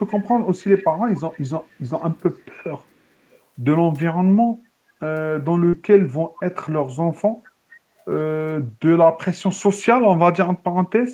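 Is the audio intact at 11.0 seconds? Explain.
Yes, at 11.0 seconds the speech plays through cleanly with no audible fault at that moment.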